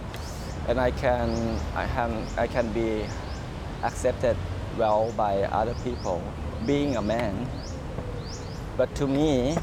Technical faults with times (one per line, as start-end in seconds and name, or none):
none